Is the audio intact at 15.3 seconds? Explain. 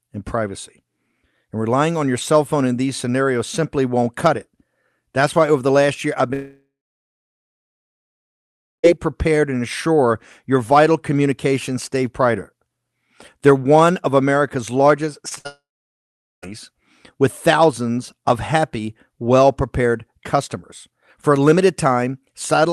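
No. Short concealed packet loss strikes twice, at 15.29–15.33 s and 15.35–15.38 s, each time about 20 ms of audio failing to arrive. The decoder bridges each gap by extending the preceding sound, heard as a quick smear or wobble. On a spectrogram, harmonics briefly freeze before rejoining.

A burst of packet loss follows immediately, 15.38–15.47 s, dropping about 60 ms. Concealment sustains the last sound while fading it, so a held buzz or hiss decays before the speech resumes further on. The waveform shows a shrinking, repetitive stretch, and the spectrogram a smooth band, then a discontinuity.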